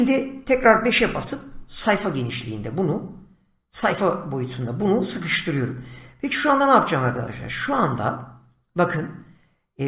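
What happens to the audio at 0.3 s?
Nothing goes wrong at 0.3 s: the audio plays through intact at that moment, with no dropout, click or distortion.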